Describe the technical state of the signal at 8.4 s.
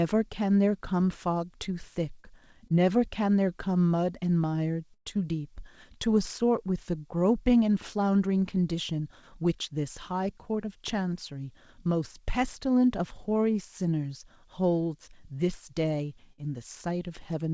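At 8.4 s the speech comes through intact, with no fault at that moment, carried by the G.722 call path, which leaves nothing above 8 kHz.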